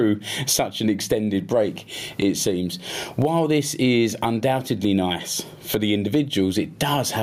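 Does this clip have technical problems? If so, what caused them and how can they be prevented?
Yes. Gain pumping runs throughout. The gain swings by about 20 dB, ducking under every loud sound. The likely cause is gain set too high, with a fast limiter pulling each peak down. Lower the microphone gain so the limiter rarely engages.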